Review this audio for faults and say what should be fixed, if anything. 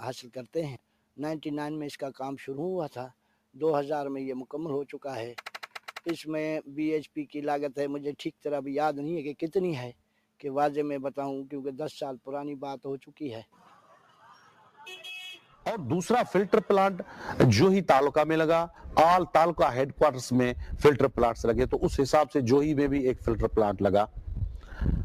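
Between 13.45 and 14.22 s, 14.41 and 14.78 s, and 15.39 and 15.64 s, the sound is cut by the noise suppressor: it misreads steady or decaying material as noise and pulls it down by about 10, 10 and 8 dB. Unlike a dropout, the sound never vanishes, and sharp onsets still pass while sustained parts sink. To prevent it, lower the suppressor's strength or slow its attenuation so sustained sound isn't treated as noise.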